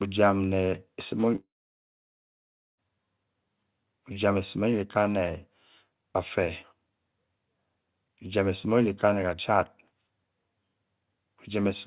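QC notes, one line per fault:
1.36–2.79 s, long network dropout: the last sound stretches into a buzzy or hissy smear that dies away within about a tenth of a second, leaving about 1.3 s of near-silence before the audio resumes at 2.79 s with roughly 1.4 s missing. This is likely a stall in packet delivery, with the receiver padding the gap. On a spectrogram, the smeared band fades into a blank column, cut off at 4 kHz like the rest of the call-band audio. On the waveform, a decaying envelope gives way to a flat line.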